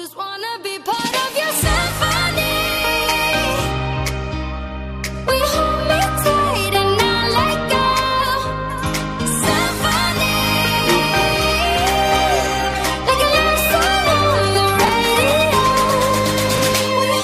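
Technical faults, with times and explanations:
14.85–14.89 s and 16.56–16.60 s, chunks out of order: in each, a block of about 21 ms plays one block late, swapped with its neighbour, giving a brief jumbled flicker. The waveform shows three abrupt steps in each, and the spectrogram shows thin vertical broadband lines at each join.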